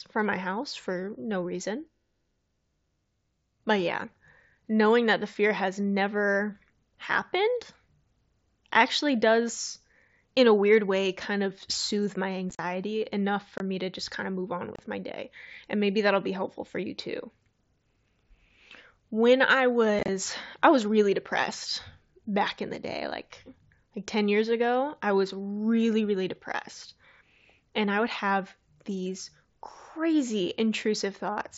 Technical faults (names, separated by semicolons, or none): unconcealed Bluetooth headset packet loss